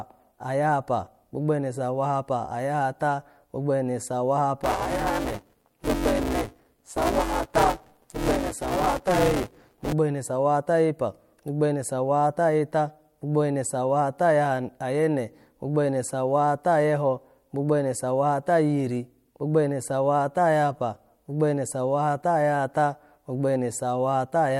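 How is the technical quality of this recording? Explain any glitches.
The recording has one glitch. From 4.63 to 9.93 s there is buffer tearing: writer and hardware pointers cross each period, so roughly 40% of every buffer replays audio about 10 ms old. The hard joins produce a robotic 188 Hz buzz under the speech, which fits a 256-sample buffer.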